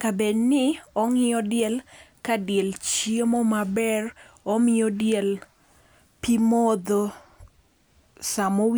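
No technical faults are audible anywhere in the recording.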